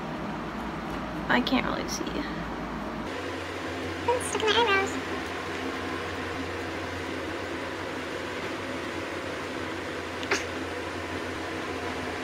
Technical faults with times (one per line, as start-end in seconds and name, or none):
1.33 overlapping chunks
3.84 overlapping chunks
6.68-12.24 train of clicks
8.85 overlapping chunks
11.36 overlapping chunks